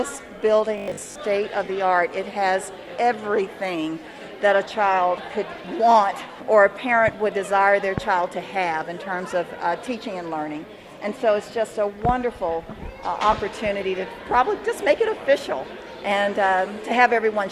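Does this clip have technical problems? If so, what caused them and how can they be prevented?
Yes. From 0.78 to 1.18 s the sound becomes a rigid 50 Hz buzz, robotic sound from repeated short buffers, likely a 20 ms chunk replayed while real audio was skipped. A spectrogram shows evenly spaced harmonic lines, and the waveform shows identical repeating cycles. A larger jitter buffer prevents it.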